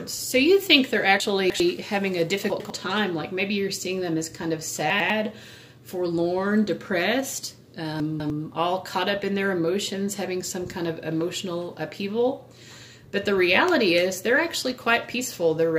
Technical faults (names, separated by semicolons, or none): chunks out of order